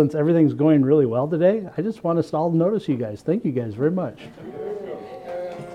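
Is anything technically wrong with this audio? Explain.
No, nothing technically wrong turns up on listening; the signal holds steady throughout with no audible defect.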